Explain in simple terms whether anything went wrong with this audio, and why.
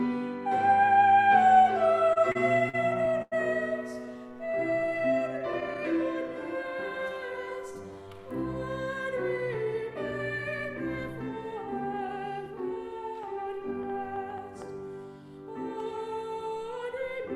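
Repeated stalls (stutter), 2.13 to 3.34 s: packets arrived late, so the player held the last sound through five pauses, the longest 96 ms. Nothing is lost, but the audio drags.

Jitter buffer slow-down, 4.06 to 7.34 s: to rebuild its reserve, the player repeated tiny pieces of sound, adding about 0.24 s, so this stretch plays at 93% speed without any change in pitch.

Scattered short gaps, 4.14 to 5.77 s: about seven single packets went missing or late, and each tiny hole of around 10 ms or less was patched over, leaving brief ticks.

Jitter buffer speed-up, 9.23 to 12.71 s: the player had too much audio waiting and trimmed about 0.3 s, so the sound runs hurried at 108% speed, still at the same pitch.

Train of clicks, 13.23 to 14.63 s: about seven similar clicks at an uneven pace, roughly four per second, likely from interference or a faulty connection or power supply.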